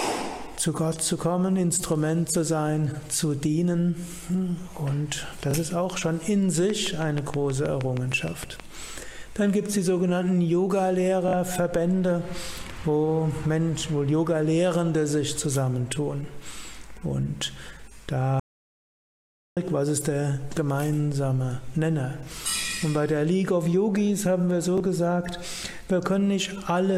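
At 5.51 to 5.54 s there is a Bluetooth stutter. About 23 ms of audio goes missing, which fits a single lost packet. The receiver repeats its last short slice instead of moving on, giving a brief buzzy hiccup before the sound picks up further along. On a waveform this appears as a tiny section of copied, identical cycles. On a spectrogram it is a narrow vertical seam where the texture briefly freezes.

From 6.70 to 8.61 s a train of clicks runs over the sound. There are around fifteen sharp pops at a steady 6.3 per second, each reaching about 10 dB above the surrounding level. They are most likely interference from nearby equipment or a struggling interface. Because the clicks are so alike and evenly spaced, the waveform shows a picket fence of spikes. The spectrogram shows a row of thin, full-height vertical lines.

The Bluetooth stutter returns at 11.28 to 11.33 s. This time it is longer, about 46 ms, which points to two packets lost in a row. 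The repeated slice cycles more than once, so the stutter sounds more like a short machine-gun rattle. The repetition shows clearly in the waveform, and the spectrogram shows a wider frozen band.

From 18.40 to 19.57 s there is an audio dropout to silence lasting 1.17 s. The input was likely disconnected or the link failed, and the recording simply carried on writing silence. The sound cuts off abruptly and returns mid-flow, with no room tone in between. The waveform is a flat line, and the spectrogram is a solid black block across every frequency.

A final single-packet Bluetooth stutter at 24.78 to 24.80 s repeats about 23 ms of audio as another brief glitch.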